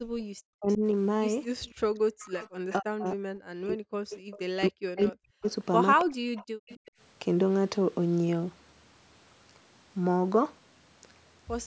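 From 0.0 to 0.81 s the talker's level sinks in patches, by roughly 40 dB at worst and for about a fifth of a second in total. This is speech suppressed in double talk: the echo canceller, likely unable to tell this talker from loudspeaker echo while both sides spoke, turned everything down. A faint, delayed copy of the voice follows at 0.68 to 0.78 s. It is echo leak, trailing the original by 275 ms at roughly 20 dB below it, likely because the far side's canceller let part of its loudspeaker pickup return. The same echo comes back from 1.62 to 3.1 s. Between 2.79 and 5.45 s the voice is cut again, by up to about 40 dB and for around one and a half seconds in total. Within that span, 4.1 to 4.39 s carries a stronger echo, roughly 15 dB below the speech. Another leak runs from 4.97 to 6.91 s, also at 275 ms and roughly 20 dB down. Inside it, from 6.04 to 6.3 s, the voice dips once more. 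Finally, from 6.58 to 6.94 s, the room sound briefly falls away, by about 39 dB over roughly 150 ms. That is background gated by the echo canceller: it clamped the microphone while the loudspeaker played, then released it.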